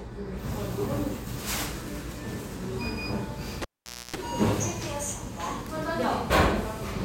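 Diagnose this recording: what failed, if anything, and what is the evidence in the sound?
A cable pulled and plugged in at 3.62 to 4.16 s, in the analogue wiring. A pop opens a near-silent gap of about 0.49 s. Within it, 60 Hz mains buzz lasts about 0.28 s while only the plug tip touches, ungrounded. A second pop marks reconnection.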